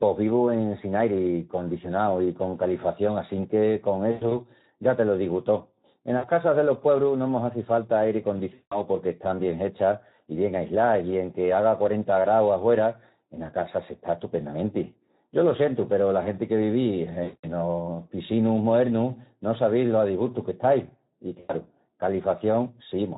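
The whole clip runs through the Speex codec, and at what sounds like a low setting, around 11 kbps, the excitation is starved of bits. The speech comes out plainly hoarse and noisy.

On top of that there's VoIP packet loss concealed by the speech codec at 4.11, 6.17 (after "te lo digu tó"), 8.53 (after "mos hazi falta airi"), 13.43, 17.23 and 21.40 s. The decoder stretches its last pitch and filter into a fading buzz or coloured noise. The longest gaps, about 180 and 200 ms at 8.53 and 17.23 s, leave the voice smeared until it recovers.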